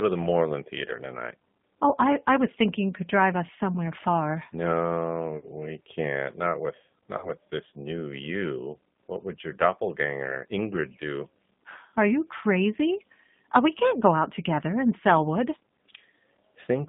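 Throughout, the speech has passed through a G.729 codec, which rebuilds each 10 ms frame from a vocal tract filter, a pitch predictor and a few pulses. The sound suggests the 8 kbit/s rate. The band is held to about 150 Hz to 3.6 kHz, and the rebuilt voice sounds plainly rough and synthetic.

Between 5.37 and 5.48 s, just before "we can't", VoIP packet loss concealed by the speech codec occurs. About 60 ms of audio went missing, which fits three lost packets. The decoder stretches the last pitch and filter into a buzzy tone or coloured noise that fades, and the speech stays weak as it resumes.

A second gap of about 40 ms follows from 7.18 to 7.30 s, just before "this new you", which fits two lost packets. The same extrapolated sound bridges the loss and then fades, and the speech recovers over the next few frames.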